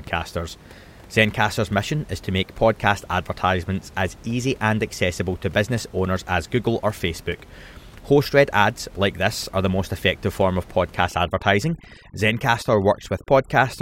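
Overdone noise removal runs from 11.08 s, right after "most effective form of", to 13.82 s. Frequency bands near the noise estimate are cut too deeply, so the room noise, about 24 dB below the speech, drops and breaks up into twinkling specks.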